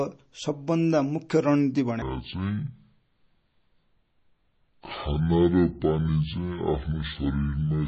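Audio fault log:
Throughout: MP3 compression. Plainly audible codec damage across the whole clip. Fine detail swirls and warbles as weak frequency components drop in and out from one frame to the next. Consonant onsets sound smeared. It is likely a low-bitrate MP3 encode, in the region of 32 kbps, which forces the encoder to thin out the quieter detail.
2.02 to 7.87 s: section at the wrong speed. Right after "सबभन्दा मुख्य रणनिति" the speech suddenly drops far lower in pitch, by roughly ten semitones, and drags along sluggishly to the end of the clip. Because pitch and tempo fall together, this is playback at about 0.57 times the original speed, not a pitch effect. The likely cause is a player or edit that ran this part against the wrong clock rate.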